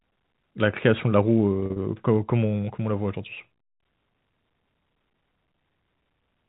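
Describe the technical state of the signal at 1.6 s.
From 1.60 to 1.76 s the sound catches and buzzes, as if briefly held on one pitch. This is packet loss with pitch repetition: about 100 ms went missing in short gaps, none longer than 40 ms, which fits several lost 20 ms packets. Each gap was bridged by repeating the last pitch period.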